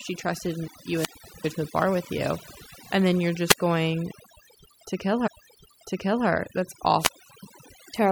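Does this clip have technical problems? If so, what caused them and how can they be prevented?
Yes. Overdone noise removal affects the whole speech clip. The reduction was set too strong. Frequency bands near the noise estimate were pulled down or cut, and quiet parts of the voice went too. The background drops and breaks up into twinkling specks. Use gentler reduction settings and record in a quieter space.

Three wireless microphone squelch dropouts occur, at 0.92 to 1.50 s, 3.47 to 3.60 s and 6.96 to 7.46 s. Each time, the FM signal fades and hiss rises. The receiver's squelch then mutes the output for about 394 ms, 83 ms and 365 ms. Keep the transmitter in range and clear line of sight of the receiver.

A stream segment repeated from 5.26 to 6.26 s. The player fetched or queued the same segment twice. About one second of the programme plays again, with a small blip at the jump back. 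Fix the player's segment tracking so each segment is queued only once.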